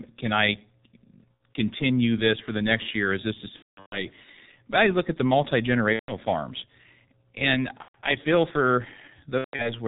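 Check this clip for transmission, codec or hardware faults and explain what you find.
Two faults are present: a low-bitrate codec throughout, and repeated packet loss patched over by that codec.

G.723.1 codec, whole clip: the speech sounds muffled, hoarse and smeared at consonants. Nothing passes above 4 kHz, and the slow 30 ms frame model fits the 6.3 kbit/s mode.

VoIP packet loss concealed by the speech codec, at 1.35–1.40 s, 3.56–4.06 s, 5.93–6.13 s, 7.82–7.96 s and 9.38–9.76 s: the speech stretches into a fading buzzy tone or coloured noise and stays weak briefly afterward. The decoder is extrapolating the last pitch and filter across missing frames. About 60 ms is lost in the first event, 330 ms scattered over the second, 150 ms in the third, 120 ms in the fourth, and 210 ms scattered over the last.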